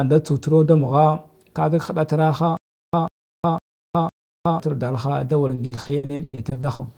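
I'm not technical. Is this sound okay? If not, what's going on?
No. From 2.57 to 4.60 s there is a stutter with silent gaps: a short snippet of speech, about 143 ms long, plays four times, each followed by about 364 ms of dead silence. This is likely a playback stall that kept replaying the last bit.

From 5.47 to 6.81 s there is repeated packet loss, giving a robotic sound. Over a dozen brief dropouts, the longest 100 ms, were each patched by stretching the previous sound, so about 40% of that stretch is filler and the speech turns choppy.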